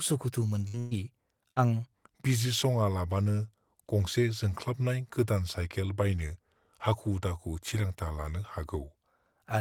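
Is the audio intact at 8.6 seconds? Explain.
No. From 1.92 to 8.95 s the speech is a section at the wrong speed, likely played against a mismatched clock at 0.856 times its recorded rate. Speed and pitch drop together, so the voice sounds slowed and about three semitones deeper.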